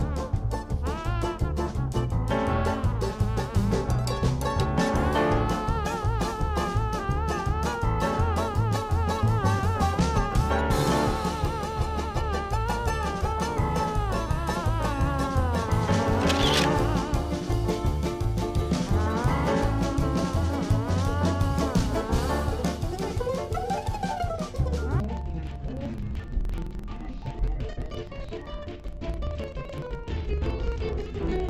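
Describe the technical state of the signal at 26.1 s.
At 26.1 s the signal shows interleaved audio read as planar, running from 25.0 s to the end at 31.5 s. Each roughly 43 ms block, which fits a 2048-sample block, is split into half-speed halves. Unlike a plain slowdown, the pace holds while the sound drops an octave, doubled and choppy at 23.4 Hz.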